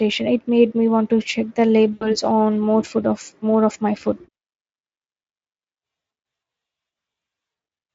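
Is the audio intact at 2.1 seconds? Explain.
No. From 1.93 to 2.17 s, between "want to check the" and "on more food of", VoIP packet loss concealed by the speech codec drops about 80 ms of data, which fits four lost frames. The decoder extrapolates the last pitch and filter with falling gain, stretching the speech into a fading buzzy tone or coloured noise that stays weak briefly after packets resume.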